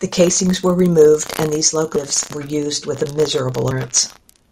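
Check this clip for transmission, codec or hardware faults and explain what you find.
The speech has two abrupt skips, at 1.96 s and 3.71 s. This is audio missing between chunks: about a third of a second vanishes at each point, likely lost while a 2-second processing chunk closes and the next opens. The first joins "were removed and these" directly to "were used with a", with no gap.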